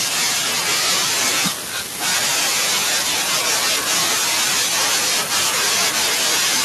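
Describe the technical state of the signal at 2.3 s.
Nothing is wrong with the signal at 2.3 s; the speech passes through that moment intact, with no dropout, distortion or other fault.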